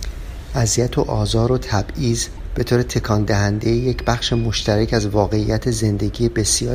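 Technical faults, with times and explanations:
2.34–2.39 s, damaged data in a compressed stream: corrupt frames make the decoder misread them and hunt for the next header, giving a brief glitch.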